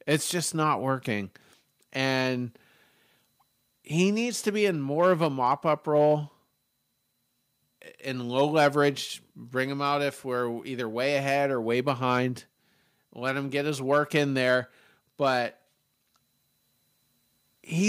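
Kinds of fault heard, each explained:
No technical faults are audible anywhere in the speech recording.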